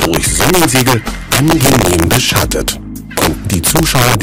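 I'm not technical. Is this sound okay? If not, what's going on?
No. Integer overflow runs through the whole clip: its loudest moments exceed the system's number limit and flip to the opposite extreme, producing sharp cracks on peaks.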